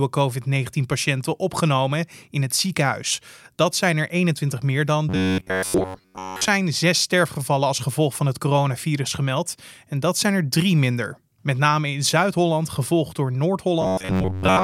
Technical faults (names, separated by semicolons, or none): robotic sound from repeated short buffers